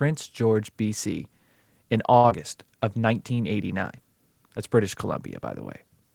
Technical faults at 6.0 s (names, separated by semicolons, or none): none